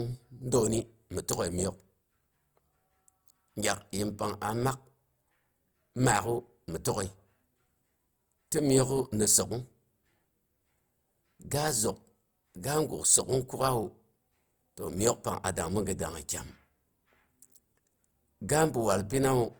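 Speech with grainy, rough, noise-filled tones throughout yet full bandwidth to 20.2 kHz, likely Opus compression at about 24 kbps, lacking MP3's swirling spectral holes.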